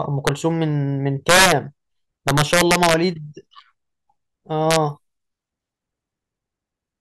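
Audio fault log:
0.27 s, 1.29–1.52 s, 2.28–2.94 s, 4.71–4.76 s, integer overflow: speech peaks overran the integer limit by about 0 to 6 dB and wrapped to opposite sign, giving violent cracks sharper than clipping's flattened buzz.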